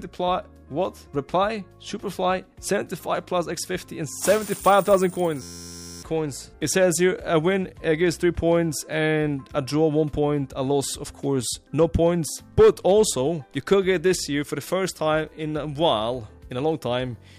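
From 5.42 to 6.03 s, a system hang loop: playback froze, replaying one 11.61 ms buffer as an 86.1 Hz buzz, seen as identical waveform cycles and evenly spaced spectrogram stripes.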